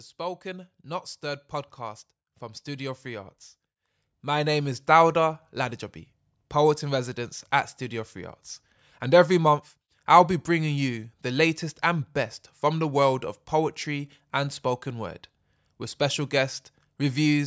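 It's a speech recording with one problem: automatic gain rising. From 0.17 s to 8.45 s the level keeps creeping up by about 13 dB in total, and the background swells right along with the voice. That's an automatic gain control deciding the input was too quiet and turning it up slowly, finishing just before "and every month I'll". The call's microphone processing caps the sound at 8 kHz.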